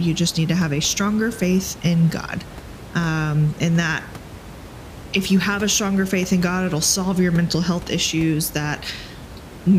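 Nothing in this speech recording points to a technical fault in the signal path, and the room noise sitting about 17 dB below the speech comes from the space around the microphone rather than from the system.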